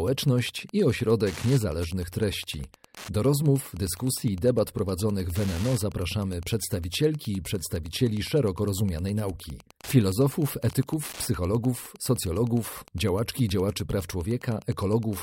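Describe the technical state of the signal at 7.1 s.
Wi-Fi interference runs through the whole clip, including 7.1 s. A nearby radio's beacon, rectified by the circuit, ticks every 102.4 ms, around 25 dB below the speech.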